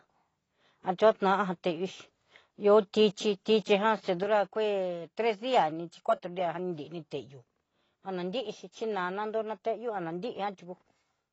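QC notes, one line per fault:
Throughout: AAC compression is the likely cause of the plainly audible codec damage. Nothing is present above 7.9 kHz. The dull, smeared sound fits a low bitrate near 24 kbps.
4.23 s to the end: one channel drops out, likely. The level falls abruptly by about 6 dB and stays there. Two matching channels summed to mono lose half their signal.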